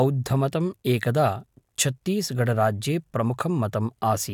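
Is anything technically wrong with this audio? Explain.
No, nothing is technically wrong with this audio.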